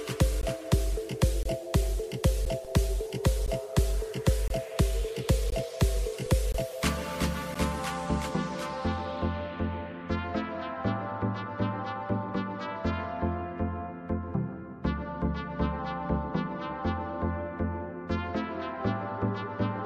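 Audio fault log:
0.41, 1.43–1.45, 2.45, 3.46, 4.48–4.50, 5.50–5.52, 6.52–6.54, 7.54 s: gap between stream segments. Hard-edged silent holes of 10 to 24 ms arrive almost exactly once per second. This fits 1 s segments whose time stamps leave a small space that the player pads with silence. The sound stops and resumes with nothing missing, unlike a dropout that loses audio.
2.65 and 6.26 s: DC step. The waveform's zero line jumps abruptly, heard as a single low thump. The offset then drains away as a 20 Hz high-pass would let it decay. The sound itself carries on uninterrupted, which separates it from a click or gap that breaks the signal.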